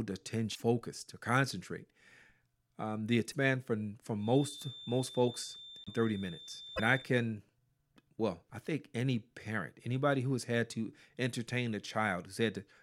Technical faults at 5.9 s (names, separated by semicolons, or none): feedback whistle; broken MP3 bit reservoir